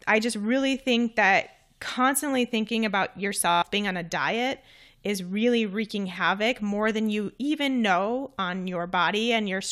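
At 3.51 s the speech breaks into a system hang loop that lasts until 3.62 s. The computer or driver stalled while the sound hardware kept replaying its ring buffer. One 11.61 ms slice repeats exactly, ten times over, which fits a 512-sample buffer. Because the slice is so short, the repeats fuse into a steady buzz at about 86 Hz. About a tenth of a second of the real speech is lost underneath it.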